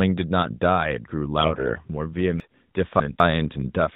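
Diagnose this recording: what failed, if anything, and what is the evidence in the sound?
The trouble starts at the network stage, with AMR bit errors from about 1.42 to 1.79 s. The speech keeps its pitch and level through that stretch but goes hoarse and gargly, with a scratchy edge. That's what you get when the less protected bits in each frame arrive flipped, here at a few percent, while the checksum on the core bits still passes. The excitation pulses land in the wrong places and the fine gain and spectral values drift, across what sounds like roughly 18 frames.

Then there are chunks out of order between 2.4 and 3.2 s, which I'd put down to buffering or the write path. It sounds like a jumbled moment with three hard joins. One 200 ms block turns up three blocks late and plays after the audio that should have followed it. Nothing is missing, it's just in the wrong sequence. The band tops out around 4 kHz, consistent with AMR-NB in its 12.2 kbps mode.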